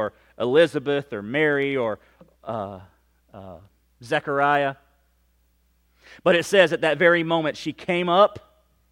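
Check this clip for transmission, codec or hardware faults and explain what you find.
There is one fault, a block size mismatch (truncated), from the start of the clip to 6.25 s. One stage hands on longer blocks than the next stage takes in, and the tail of each block is discarded. The 43.1 Hz rate fits 1024-sample blocks at a 44.1 kHz rate. Each cut leaves a small discontinuity, so the speech carries a steady 43.1 Hz buzz. Pace and pitch stay at their normal speed.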